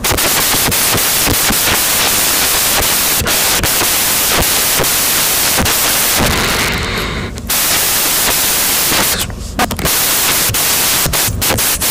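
Throughout the speech, samples built from the wrong bytes, misaligned, byte-swapped or offset, push the fast-changing low bits to the top, turning the audio into loud broadband noise.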